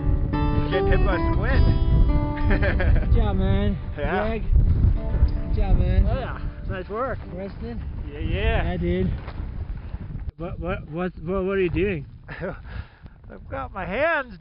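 Nothing stood out as a technical fault on listening to the clip.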